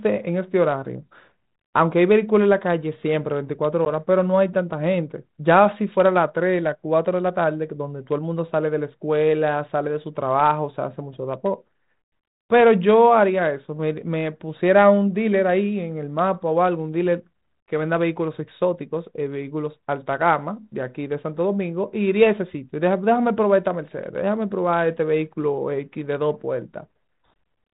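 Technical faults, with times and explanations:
3.85 to 3.91 s, packet loss on an ADPCM call: a hard-edged hole of about 10 ms, roughly a single lost packet, is filled with silence on this 32 kbit/s G.726 speech. Because ADPCM sends only differences from an adaptive prediction, the decoder's predictor and step size no longer match the sender's, so the speech comes back slightly distorted and settles over the following tens of milliseconds. A plain PCM dropout would resume cleanly instead.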